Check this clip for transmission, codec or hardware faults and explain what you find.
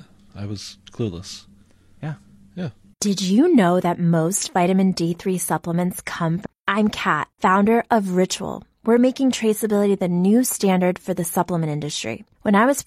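One fault is audible, a stream segment skipped at 6.41 to 6.46 s. The speech jumps ahead with a brief blip and no silent gap, unlike a packet dropout. A segment of the stream likely failed to load, so the player resumed at the next one.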